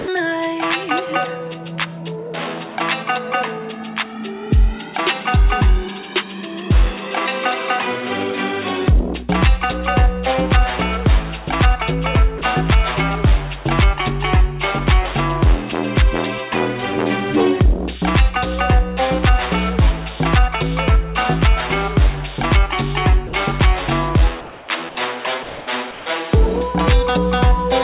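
Sound dropped by the voice detector first occurs at 0.00 s, where the opening 80 ms is replaced by steady, flat noise. It recurs for 30 ms at 12.38 s and for 60 ms at 23.27 s. Each time, the sound vanishes under that noise and returns. The likely cause is a sender-side voice detector treating quiet material as background and stopping transmission, with the receiver filling the gap with comfort noise.

Comfort noise in place of the background follows at 24.41–24.68 s. For 270 ms, the background, sitting about 24 dB below the loud passages, turns into a smooth, textureless hiss about 1 dB quieter than the real ambience around it. Because the audio has nothing above 4 kHz, the substitute noise sounds dull and narrow.

Sound dropped by the voice detector returns at 25.43–25.67 s. There, 240 ms is replaced and about 90 ms of actual sound disappears under the fill.

Comfort noise in place of the background comes back at 25.91–26.06 s. 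For 150 ms, the ambience, about 19 dB below the loud passages, becomes featureless noise about 2 dB quieter, before the real background resumes.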